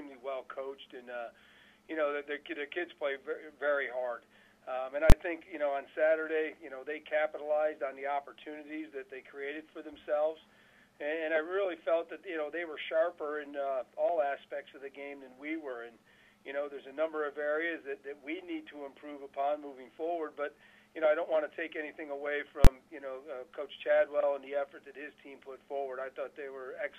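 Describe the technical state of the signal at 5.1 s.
At 5.10 to 5.12 s the signal shows invalid numbers at full scale. A calculation returned infinite or invalid values, which became the extreme sample value, so the output is pinned flat at one extreme value far beyond the audio's peaks for about 21 ms, which fits a 1024-sample processing block. With a block this short it is heard as a single hard bang. Unlike ordinary clipping, which flattens only the peaks of a loud waveform, the output here is held at one extreme value for the whole block with none of the original sound passing through, and it begins and ends exactly on the block edges.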